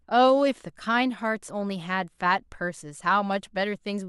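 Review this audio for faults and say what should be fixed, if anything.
No faults turn up anywhere in the speech. Nothing here needs fixing.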